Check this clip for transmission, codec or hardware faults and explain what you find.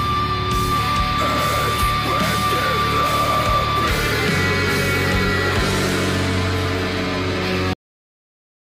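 One fault stands out, a cut-off end. Cut-off end at 7.73 s: the final stretch of audio was never written out or played back, most likely because the last buffers were lost when recording or playback stopped. The sound halts mid-event with no natural decay or fade, and the remaining 0.88 s is silent, so the clip ends abruptly rather than trailing away.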